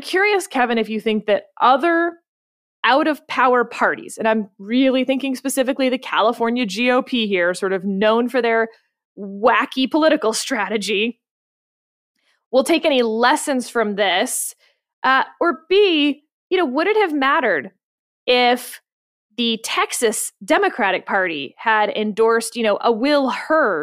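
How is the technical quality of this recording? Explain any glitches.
The recording has three short stretches where the speech slows and drops in pitch, then snaps back. These come at 0.33 to 2.44 s (ending just before "out of power parties"), 6.39 to 8.02 s (between "really thinking specifically the" and "for their wacky political"), and 15.53 to 16.19 s (ending before "you know would it"). Each is a drift correction step: playback slows by 6.3% and pitch falls 113 cents, just over a semitone, likely from clock-matching software adjusting its buffer. On a spectrogram, the harmonics step down during each stretch. The waveform looks stretched.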